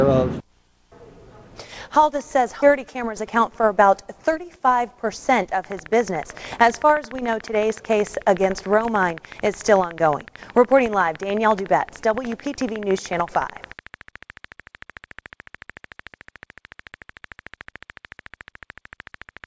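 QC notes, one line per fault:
2.62 s: skip ahead. Playback jumps forward with no gap filled, so roughly 400 ms of the sound never plays and the material on either side butts together almost directly. This is what happens when a stretch is discarded while later audio is already queued, either lost in transit or thrown out by an overfull jitter buffer, and it cuts the end-to-end delay by about the same 400 ms.
2.76–3.89 s and 4.29–4.75 s: jitter buffer speed-up. With more audio queued than its target, the receiver trims short pieces of one or a few pitch periods over and over to bring the delay down. The first run plays about 5% fast and drops around 70 ms. The second plays about 9% fast and drops around 50 ms. The pitch stays the same but the sound comes across hurried.
5.64–19.45 s: train of clicks. Regular pulses at about 13.6 per second, roughly 200 in all, sit over the sound and through pauses as a steady ticking, peaking around 5 dB above the signal. 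The even spacing and near-identical shape point to a periodic injection, likely interference from nearby equipment or a faulty connection or power supply, rather than anything in the programme itself.
Throughout: WebRTC call path, working normally. The band stops at 8 kHz, which fits G.722 at 64 kbps.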